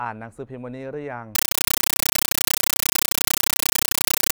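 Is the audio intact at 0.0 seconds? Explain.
Yes, the speech at 0.0 seconds is intact, with nothing at that moment breaking up, dropping out or distorting the sound.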